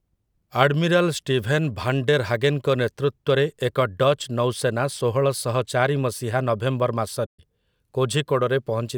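A speech clip with a playback stall from 7.26 to 7.40 s, where the sound stops mid-flow, likely because the player ran short of buffered data; spectrograms show a blank full-band column, waveforms a flat gap.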